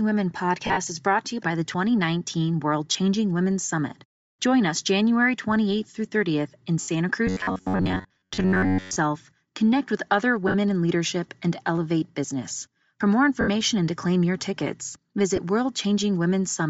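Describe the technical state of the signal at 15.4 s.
Right around there, from 15.36 to 15.38 s, there's a 20 ms dropout from lost LE Audio frames, which fits two 10 ms frames going missing. The decoder patches the gap by reusing the last spectrum with scrambled signs, so you hear a brief noisy smear. Under that, the speech has the breathy, grainy top end of plainly audible Bluetooth LC3 compression, likely from a low bitrate filling the zeroed upper band with noise.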